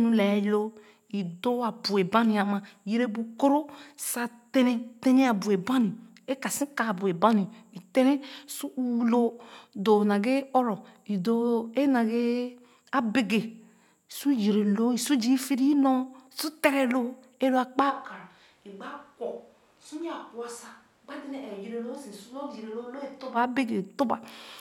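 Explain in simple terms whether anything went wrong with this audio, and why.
A switch to a distant microphone happens from 17.92 to 23.35 seconds, right after "ee lo a". The speech suddenly turns hollow and roomy, noticeably quieter and thinner, with more background noise, likely because a farther microphone was used in place of the close one.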